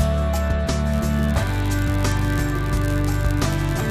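From 0.91 s to the end, a block size mismatch (padded) appears. One stage hands over blocks slightly shorter than the next stage expects, and the shortfall in each block is filled with silence. These tiny gaps recur about 91.5 times per second and produce a steady buzz at 91.5 Hz over the sound. Because each block is stretched with padding, playback runs at 0.996 of normal speed, a very small slowdown. The timbre itself stays intact.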